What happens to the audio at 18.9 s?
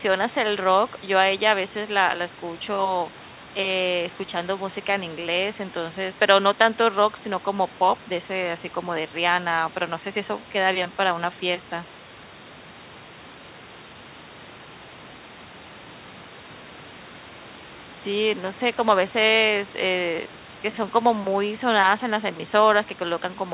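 At 18.9 s the speech carries on intact, with no dropout, glitch or distortion, only the narrow call-path bandwidth that leaves nothing above 4 kHz, which fits a G.711 A-law call at 64 kbps.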